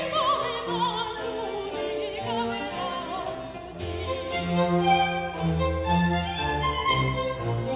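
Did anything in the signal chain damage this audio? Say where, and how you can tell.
No, nothing in this music stood out on listening as damage from any stage of the signal chain.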